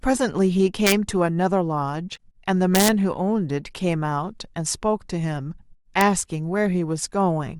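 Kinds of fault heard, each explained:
Integer overflow: loud peaks in the speech exceed the integer ceiling and wrap to the opposite sign instead of being limited, giving violent cracks at 0.87–0.92 s, 2.75–2.88 s and 6.01 s, about 3, 2 and 0 dB over. Unlike clipping's flattened buzz, each wrap snaps across the full range.
Damaged data in a compressed stream: around 2.13–2.19 s the decoder hits corrupted frames, loses sync and hunts for the next valid header, leaving a brief glitch. It differs from the overflow cracks because it doesn't follow loud peaks; it is a glitch tied to the stream itself.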